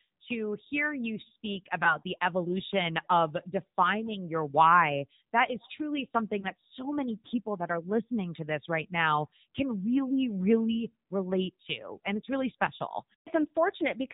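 The speech is carried throughout by the AMR narrowband mobile codec. Nothing above 4 kHz survives, and the plainly audible buzzy, synthetic edge fits a low rate near 7.4 kbps. A simple telephone band filter would dull the sound without adding that modelled, pulse-driven graininess.

Lost AMR speech frames occur at 1.84 s, after "to hear you speak" and before "the evolution of defining", and at 6.40 s, after "that is truly something" and before "so many people that". Each fits a single missing 20 ms frame. The decoder carried the previous pitch and vocal tract settings forward with falling gain, so there is a brief dip or warble rather than a hard cut or click.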